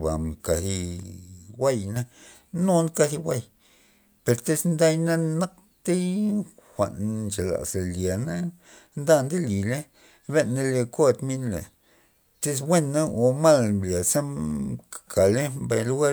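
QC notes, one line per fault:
1.03–1.96 s, sudden gain jump: the speech and its background noise drop together by about 6 dB in a single step at 1.03 s and return just as abruptly at 1.96 s, likely a gain setting applied instantly without any ramp between samples.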